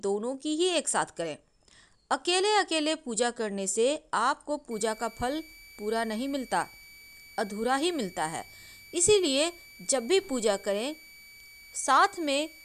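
From 4.71 s to the end, a switching supply whistle sits under the sound: a thin, steady high tone, wavering between about 2.28 and 2.31 kHz, roughly 25 dB below the main signal. A switching power supply is running in an audible burst mode or beating with another one, and that drifting pitch rides along with its changing load. On a spectrogram it forms a narrow horizontal line near 2.3 kHz, wobbling slightly; the waveform shows little beyond a slight thickening.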